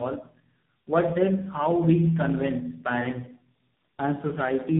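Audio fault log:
throughout, tandem speech coding: the speech comes across rough, muffled and warbly, with nothing above 3.8 kHz. It sounds like three speech coders in a row, each recoding the previous one's damage, and the final smeary warble fits a low-rate AMR-NB stage.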